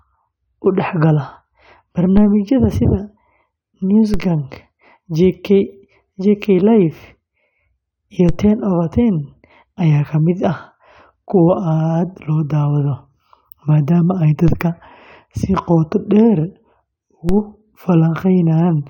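The player opened on a low-bitrate version of an adaptive stream and switched up once it had gauged the connection. For the first 2.0 s the speech has nothing above 7 kHz and carries heavier codec artefacts, consistent with AAC at around 32 kbit/s. At 2.0 s it jumps, with no gap, to a fuller, brighter sound that points to roughly 96 kbit/s.

Five DC steps follow, at 2.17, 4.14, 8.29, 14.48 and 17.29 s. Each time the waveform's zero line abruptly shifts and then drains away as if through a high-pass at about 5 Hz. Each shift is heard as a brief low thump under the speech, while the speech itself carries on unchanged.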